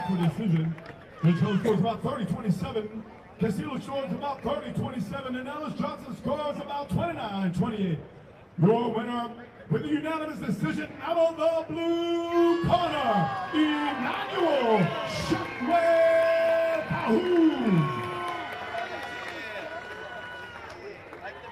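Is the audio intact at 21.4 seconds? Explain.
Yes, the audio is intact at 21.4 seconds, with no fault present at that moment.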